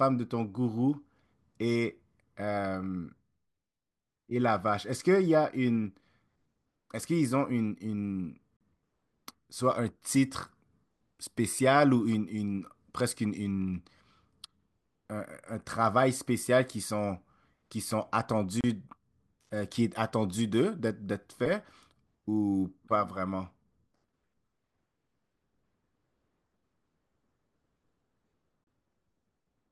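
Gaps at a join of encoded pieces fall at 8.57 to 8.61 s, 18.61 to 18.64 s and 28.64 to 28.67 s, lasting about 41 ms, then 31 ms and 31 ms, about 10 s apart. The speech seems to have been encoded in separate chunks and joined without trimming, so each join keeps the encoder's start-up delay and final-frame padding. Each sounds like a brief dropout with softened edges, after which the speech picks up where it stopped.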